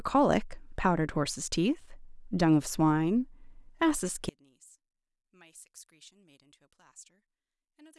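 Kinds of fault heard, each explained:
One channel inverted: from 4.29 s to the end, the speech falls by about 31 dB in mono and only a faint trace remains. Likely one stereo channel has reversed polarity, so the centred speech, identical in both channels, cancels when they are summed.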